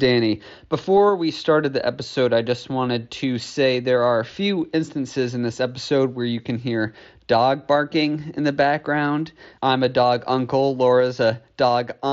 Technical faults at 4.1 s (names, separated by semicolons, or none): none